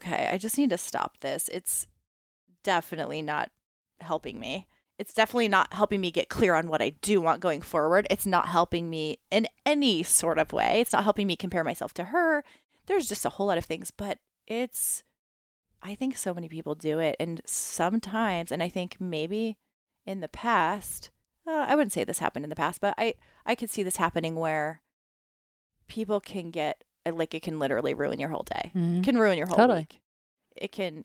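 No technical faults can be heard anywhere in this recording; the signal holds steady throughout.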